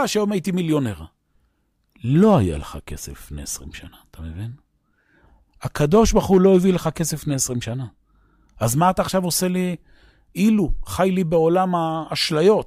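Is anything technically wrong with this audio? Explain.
Yes. Hard clipping at 2.23–2.37 s and 5.81–6.57 s: speech peaks overdrive a stage by about 2 dB, leaving flat-topped waveforms, high-frequency smears on the spectrogram, and brief crackle.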